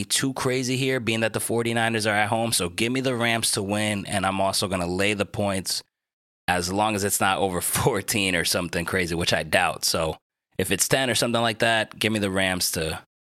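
No technical faults can be heard anywhere in the speech recording, and the signal stays steady and intact throughout.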